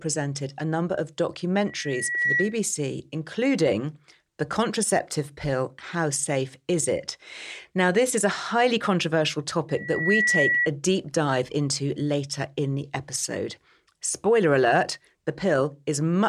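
A microphone is picking up the loudspeaker it feeds, and the loop runs away at 1.9 kHz, giving loudspeaker feedback squeal from 1.67 to 2.59 s after "a number of" and from 9.69 to 10.68 s after "highly controversial". Each time a tone swells over about half a second to around 5 dB above the speech.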